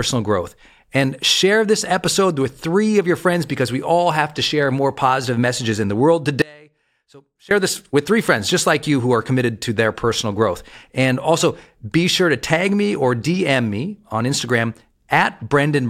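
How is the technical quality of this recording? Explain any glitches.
One glitch stands out: an audio dropout to a faint residue from 6.42 to 7.51 s, between "messages in the world" and "this with three friends". The signal feed was likely interrupted while the path stayed live, so the speech cuts out abruptly for about 1.1 s, leaving only faint sound roughly 25 dB below the signal.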